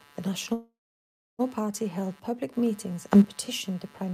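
Computer activity noise runs under the speech for the whole clip: a buzzy, chirping pulse train repeating around 150 times per second, sitting roughly 25 dB below the speech. Its level and texture follow the machine's load rather than the talker, because processor, graphics or mouse activity is disturbing the ground shared with the audio circuitry. It stays present through pauses and changes independently of what is being said.

At 0.53 s the speech stops and a call audio freeze begins, lasting until 1.41 s. The last sound is stretched into a decaying buzz or hiss that thins out into about 640 ms of silence. When the audio resumes, it picks up exactly where it stopped, with nothing skipped. That points to delayed packets draining the jitter buffer and the receiver filling the wait. The stall inserts about 855 ms into the timeline and leaves everything after it that much later.

After "held public meetings", a sudden gain jump occurs between 3.12 and 3.24 s. 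The speech and the background noise rise together by about 12 dB in a single step, with no fade, until "petitioned the". Because the floor moves with the speech, this is a gain change and not louder talking. The likely cause is a digital gain setting or bit shift applied without a ramp.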